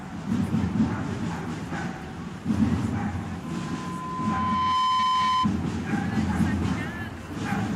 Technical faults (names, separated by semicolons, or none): loudspeaker feedback squeal